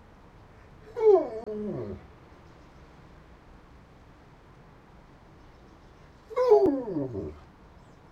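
Damaged data in a compressed stream appears twice, from 1.43 to 1.47 s and again from 6.63 to 6.68 s. Each time, a short stretch of the encoded bitstream is corrupt, so the decoder cannot read those frames correctly, loses its place, and has to hunt for the next valid frame header before normal decoding resumes. Each event is heard as a sudden chirp, squawk, click or short hole lasting roughly 45 ms, cutting abruptly into the sound.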